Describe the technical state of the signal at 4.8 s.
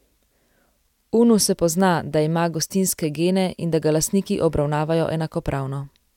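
At 4.8 s the speech signal is intact, with no audible fault at that moment.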